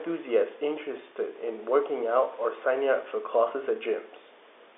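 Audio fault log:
No faults are heard in this speech. The G.711 telephone coding holds it to a narrow line band of about 250 Hz to 3.6 kHz with nothing above 3.8 kHz, and the room noise sits about 29 dB below the speech.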